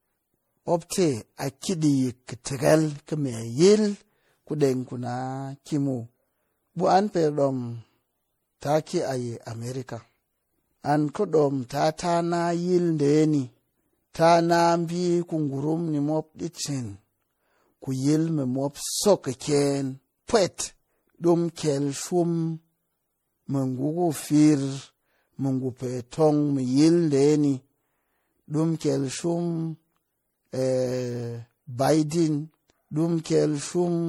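Generation loss runs throughout: the speech sounds swirly, smeared and hollow, consonant attacks blur, and nothing reaches above 20.8 kHz. The likely cause is around seven passes through what fits a 64 kbit/s MP3, each requantising on a shifted frame grid, compounding errors.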